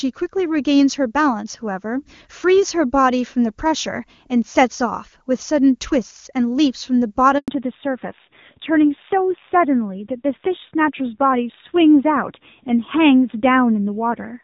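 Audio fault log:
7.38 s, handover gap: the speech cuts off abruptly, fading out within a few tens of milliseconds, and stays silent for 100 ms before returning at 7.48 s. The call was being passed from one network to another, and during that switch no speech frames got through, so whatever was said in that tenth of a second is simply missing rather than smeared or repeated.
7.48 to 14.43 s, fallback to narrowband: from the moment sound resumes, the voice is duller, boxier and rougher, with nothing at all above 4 kHz. Before the break the call ran on the AMR wideband (HD Voice) codec at 23.85 kbit/s, where the speech sounds clear and carries sibilance and air up to 7 kHz. After the handover it came back on the older AMR narrowband codec at 7.4 kbit/s, which cuts off the upper band and codes what remains more coarsely.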